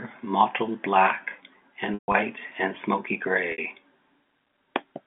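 From 1.94 to 2.14 s, just before "and smoky", the sound sticks on a buzzy repeated tone that fades into silence. At 3.52 to 3.58 s, right after "and smoky", a brief buzzy hold follows. This is packet loss with pitch repetition: the receiver looped the last pitch period to fill about 160 ms of scattered gaps, the longest 140 ms, and later a 60 ms gap.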